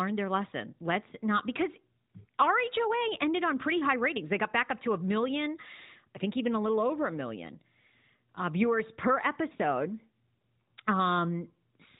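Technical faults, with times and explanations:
9.56–9.59 s, lost AMR speech frame: A brief dip and warble interrupts the speech. This fits a single lost 20 ms frame. The decoder repeated the last good pitch and vocal tract settings at lower gain, then recovered, all within narrowband AMR audio.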